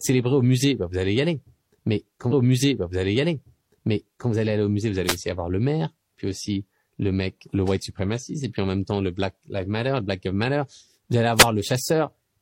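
A wireless microphone noise hit occurs at 5.06 to 5.17 s and again at 11.36 to 11.47 s, each lasting about a tenth of a second. The speech briefly drops under a swish of static as the FM radio link fades. Reflected copies of the signal cancel the direct path at the receiver, so its own noise rises and covers the speech.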